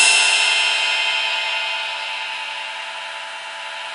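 No technical faults can be heard anywhere in this clip. The audio holds steady throughout, with nothing breaking into it at any point.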